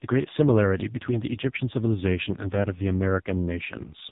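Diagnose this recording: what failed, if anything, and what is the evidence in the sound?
Codec stage: the AMR narrowband mobile codec at a low mode, likely around 5 kbps, makes the speech buzzy and synthetic throughout, with nothing above 3.8 kHz surviving.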